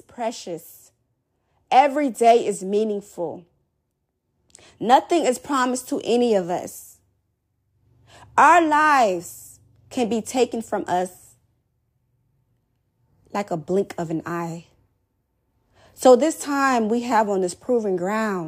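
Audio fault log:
No faults heard in this recording.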